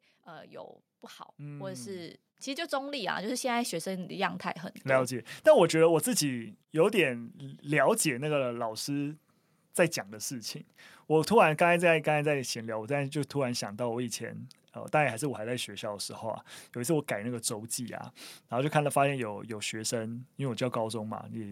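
From about 0.25 s to 21.47 s the speech and the background around it swell together, climbing steadily by about 16 dB over the whole stretch rather than jumping at any one point. This is automatic gain rising: the automatic gain control judged the incoming level too low and kept nudging its gain upward, so the room noise is lifted along with the voice and the level never settles before the end.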